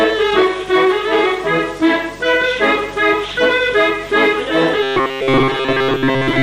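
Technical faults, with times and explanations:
4.83 to 6.43 s, robotic sound from repeated short buffers: a rigid, metallic buzz at 133 Hz. It likely comes from a stretch of about 7.5 ms being replayed for most of this span.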